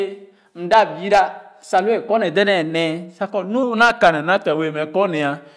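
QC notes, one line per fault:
3.63–5.57 s, wrong sample rate: from 3.63 s to the end, the audio is clocked out slower than it was captured, with no rate conversion in between, which fits 24 kHz material being played at 22 kHz. Because every sample simply arrives later, duration and pitch shift together: the speech runs at about 0.92 times its proper speed and drops by about 1.5 semitones, so the voice turns slightly deeper, heavier and more drawn out.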